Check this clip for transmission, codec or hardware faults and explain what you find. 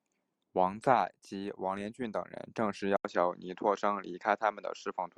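One fault is present: the input switched to a poorer device at 2.97 s and stayed on it until the end of the clip. The likely cause is that the recording system changed its capture source mid-stream, to a narrower-band microphone or headset profile. At the switch there is an 80 ms gap of silence. After it, the speech loses everything above 7.6 kHz and sounds duller, with a new, faint background noise floor about 50 dB down, while the overall level stays essentially the same.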